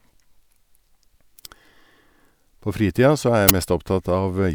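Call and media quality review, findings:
Uninitialised buffer at 3.49 s: one short, loud burst of digital noise in the speech, about 11 ms long, which fits a 512-sample buffer. Playback path read a block before audio was written to it, so leftover memory played as samples. Noise-like content sets it apart from a dropout's silence or a single-sample click.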